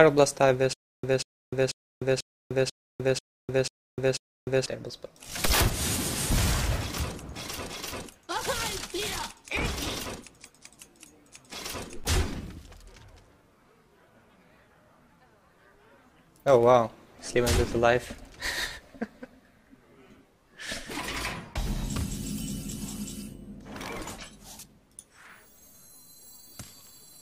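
Stutter with silent gaps runs from 0.73 to 4.66 s: a 190 ms burst repeats eight times, each followed by about 301 ms of dead silence, a steady 491 ms cycle. The stream likely stalled and replayed its last fragment, losing the intervening audio.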